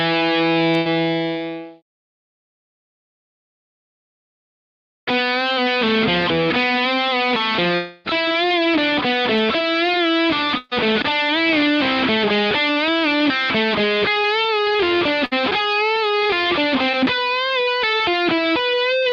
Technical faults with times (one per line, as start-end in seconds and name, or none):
0.77-0.87 burst of packet loss
7.75-8.08 long network dropout
10.58-10.73 burst of packet loss
15.25-15.33 burst of packet loss
16.91-16.95 short concealed packet loss